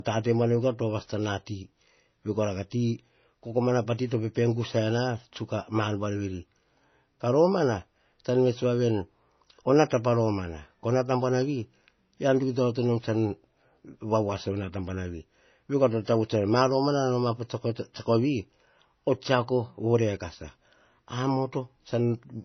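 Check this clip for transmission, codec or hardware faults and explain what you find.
One codec fault runs through the whole speech clip. It sounds like low-bitrate audio saved at a high bitrate: nothing is present above 6 kHz, so the speech is dull and carries the first encode's artefacts. The likely cause is an earlier MP3 encode at around 24 kbit/s, later re-saved as a 256 kbit/s MP3 that cannot restore what was discarded. A spectrogram shows a flat ceiling at 6 kHz with smeared blocks beneath it.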